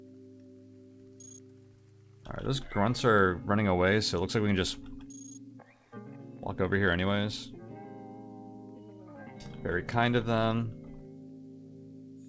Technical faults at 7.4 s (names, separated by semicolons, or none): none